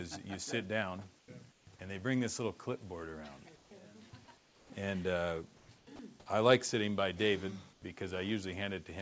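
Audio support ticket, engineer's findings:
Comfort noise in place of the background at 1.19–1.28, 1.52–1.67, 3.56–3.71, 4.37–4.70, 5.57–5.69, 5.78–5.87 and 7.73–7.82 s. Steady, featureless hiss replaces the real background, about 1 to 9 dB quieter. Likely discontinuous transmission with receiver-side noise fill.

Sound dropped by the voice detector at 5.96–5.99 s. 30 ms of sound swapped for steady noise. Likely the sender's detector misread quiet sound as background and paused sending.

Call path: nothing above 8 kHz, which fits G.722 at 64 kbps.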